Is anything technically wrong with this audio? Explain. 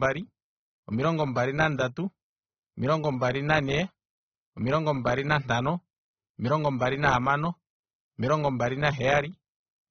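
Yes. Throughout the speech, the sound is dull and smeared, with a fizzy, warbling edge on sibilants and nothing above 7.1 kHz. This is likely AAC compression: AAC-LC at a low bitrate, near 27 kbps, lowers the cut-off and quantises bands coarsely, leaving gaps or substitute noise.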